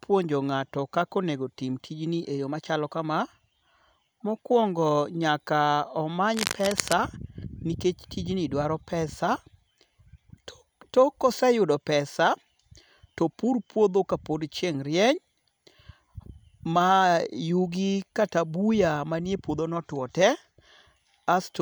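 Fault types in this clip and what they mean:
Cable scratch noise: A dense, uneven burst of scratching and rustling sits over the speech from about 6.34 to 6.93 s. It lasts a little over half a second. It is loud, only a few decibels below the speech itself. The noise is rough and irregular, not a steady hiss or a single click. The likely cause is a worn cable or connector being moved, so its contact resistance changed rapidly and added noise to the signal.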